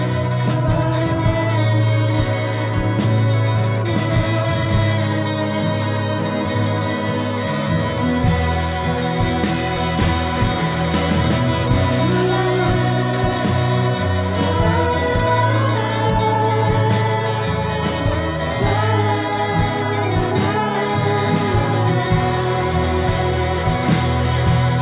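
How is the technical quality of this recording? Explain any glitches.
The technical quality holds up with no glitches to explain, though as audio carried over a call it has nothing above 4 kHz.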